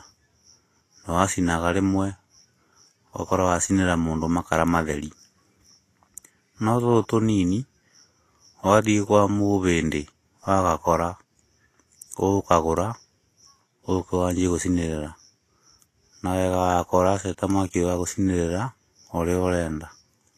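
From start to finish, the speech is hissy and grainy, with nothing above 14.2 kHz and the treble turned to rough noise. That's likely Vorbis compression at a low setting, which fits a bitrate around 32 kbps, so attacks blur too.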